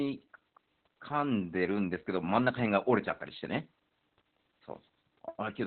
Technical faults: Opus voice compression

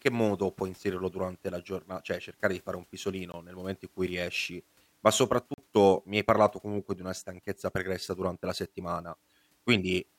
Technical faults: block of digital silence

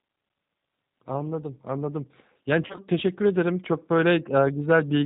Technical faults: G.729 codec; VoIP packet loss concealed by the speech codec

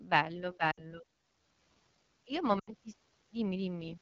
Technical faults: AMR wideband (HD Voice) codec; lost AMR speech frames

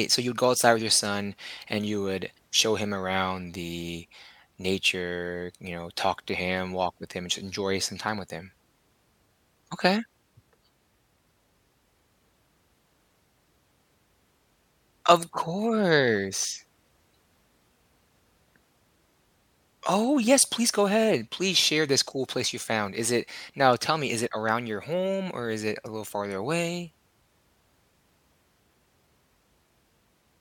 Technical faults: none

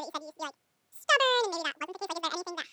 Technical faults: audio read two samples at a time (double speed)

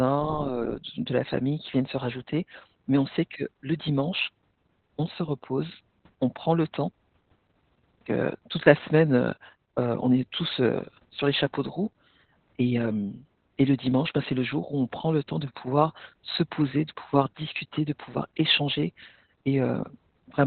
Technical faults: Opus voice compression

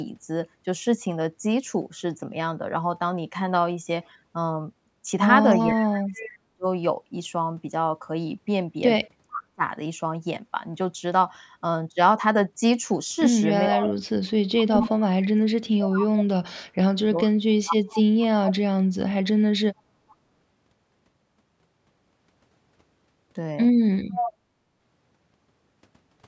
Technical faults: speech suppressed in double talk; echo leak; background gated by the echo canceller

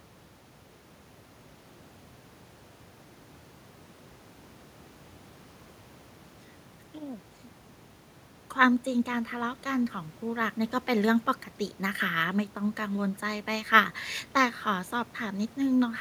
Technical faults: none

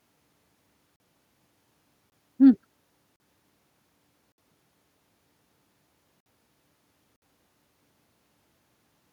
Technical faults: block of digital silence

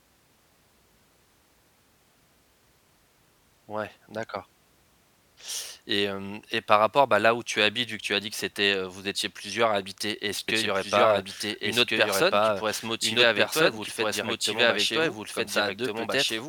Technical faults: doubled audio track

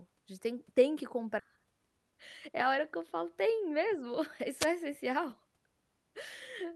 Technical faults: skip ahead; jitter buffer speed-up; wireless microphone noise hit

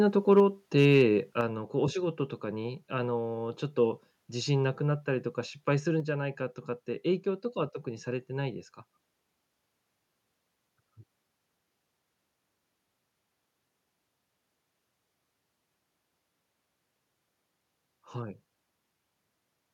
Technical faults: microphone overload; microphone volume stepped down

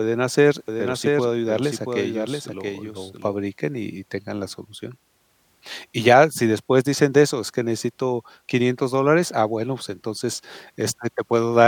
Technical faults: doubled audio track

